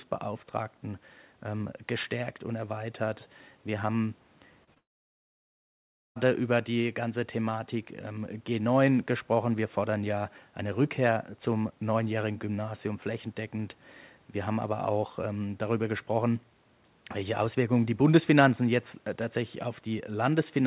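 At 4.64 s and again at 4.74 s there are two brief instances of short concealed packet loss, each roughly 20 ms of missing audio that the receiver papered over by extending the preceding sound. Each is heard as a tiny smear or wobble rather than a gap. At the first, the fill ran slightly long, so about 11 ms of real audio was dropped to catch up.

From 4.78 s to 6.18 s comes a long network dropout, likely a stall in packet delivery. The concealment sustains the last sound only briefly, then about 1.3 s of near silence follows, with just the faint room noise some 40 dB below the speech. Unlike the short losses, nothing bridges this gap: the band-limited, 4 kHz-topped audio simply resumes at "über die ganze", with the lost stretch gone.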